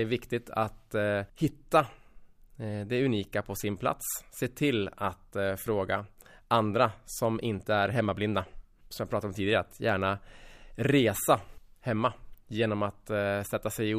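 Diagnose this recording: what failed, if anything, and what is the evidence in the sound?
Nothing failed; no fault can be heard anywhere.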